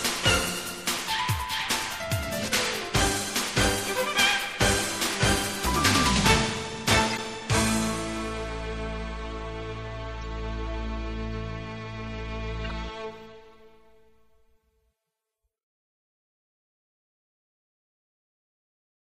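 Throughout the clip the sound turns watery and swirly, with smeared attacks. This is MP3 compression, likely at a low bitrate around 64 kbps. Starved of bits, the encoder switches weak frequency lines on and off between frames. The damage is continuous, not a single event.

Corrupt frame decoded faults occur at 7.10 to 7.19 s, at 10.22 s and at 12.64 to 12.75 s. Each is a brief chirp or burst of noise, peaking at about −20, −35 and −25 dBFS respectively. Unlike the steady swirl of compression, each one is abrupt and alien to the surrounding sound. Damaged data put energy at the wrong frequencies for a few frames.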